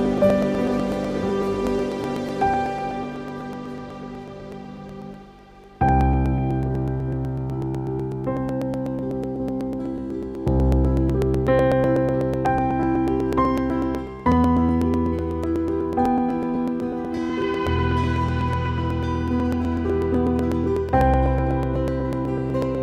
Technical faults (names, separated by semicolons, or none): periodic USB or driver dropouts